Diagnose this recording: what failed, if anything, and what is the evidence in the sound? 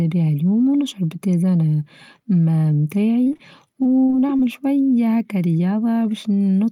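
Repeated packet loss on the network path leaves the speech choppy and robotic from 3.21 to 3.41 s and 3.83 to 4.41 s, with short holes of up to 38 ms. Each hole is filled by extending the preceding sound, so it is patched over rather than dropping to silence as a buffer underrun would.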